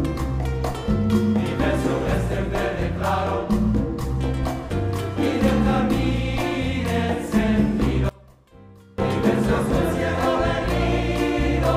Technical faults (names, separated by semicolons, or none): one channel inverted